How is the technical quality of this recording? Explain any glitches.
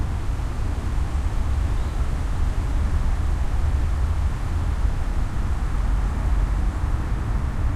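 The technical quality of this recording is sound, with no glitches to explain.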